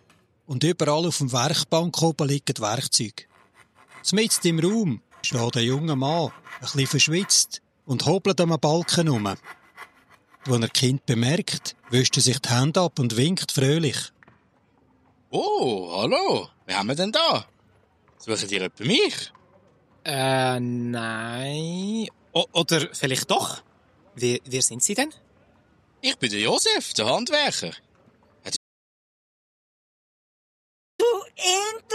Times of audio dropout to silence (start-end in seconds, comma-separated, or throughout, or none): 28.56-30.99